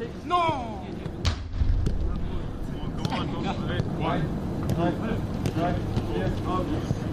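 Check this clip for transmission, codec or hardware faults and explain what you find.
One fault shows up: a single click at 3.83 s from dropped samples. A fraction of a millisecond of the stream is likely missing, so the waveform jumps abruptly to a later value. That step is heard as one sharp click and appears as a thin vertical line across the spectrum. Unlike a dropout, no audible stretch of sound goes missing.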